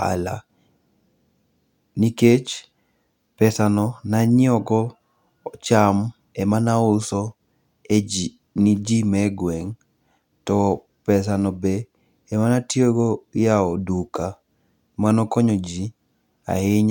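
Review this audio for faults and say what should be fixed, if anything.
Nothing needs fixing: the speech signal holds steady throughout, with no audible technical faults anywhere in the recording.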